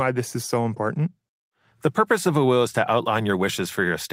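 No technical faults can be heard anywhere in the speech.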